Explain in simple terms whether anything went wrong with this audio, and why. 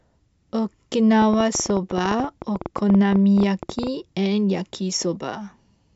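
Something in the recording chain, most likely electrical interference from nearby equipment or a faulty connection or power supply, kept injecting short pulses into the signal. The result is a train of clicks from about 1.22 to 3.88 seconds: around thirty similar ticks, roughly eleven per second at an uneven pace. They sit on top of the speech and stand out clearly, including in the small gaps.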